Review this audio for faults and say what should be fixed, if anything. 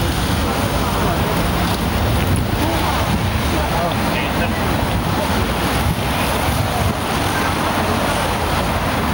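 The gain pumps throughout the clip, ducking by around 5 dB under each loud sound, leaving the level squashed. This is gain pumping, likely from input gain set far too high with a fast limiter or compressor clamping every peak. To prevent it, lower the microphone gain so peaks sit below the limiter and use slower compression settings.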